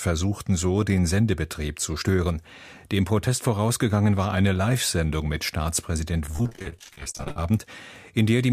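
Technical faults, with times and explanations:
6.26–7.51 s, repeated packet loss (robotic sound): over this stretch the audio turns choppy, with a mechanical edge and pieces dropping out. Packets kept going missing or arriving late, roughly 34 times in just over a second, and each hole was covered by stretching the last bit of sound forward. The holes are short, none much beyond 44 ms, but they come so densely that nearly half the span is patched rather than real, which produces the robotic texture.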